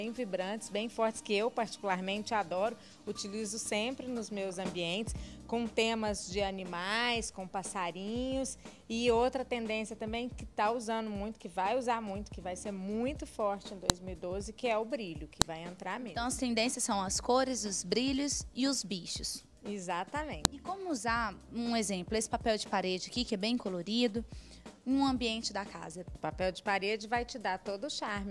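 File header played as audio shows up as sharp, loud clicks at 13.90, 15.42 and 20.45 s. Each marks a join where a new WAV piece began with its header still attached, so those few dozen bytes play back as samples and snap through regardless of the surrounding audio.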